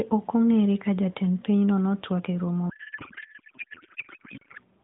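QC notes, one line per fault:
2.70–4.61 s, codec payload misread: right after "pinyno notwak e romo" the speech turns into garbled noise and warble that barely tracks it. That fits octet-aligned AMR frames being unpacked as bandwidth-efficient, so the decoder reads every field from the wrong bits.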